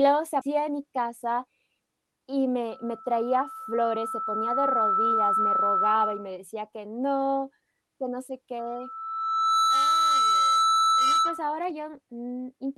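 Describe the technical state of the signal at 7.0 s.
At 7.0 s the signal is intact, with no dropout, glitch or distortion beyond the ordinary character of the call codec the speech passed through.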